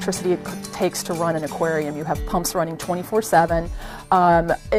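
No technical faults can be heard anywhere in the clip.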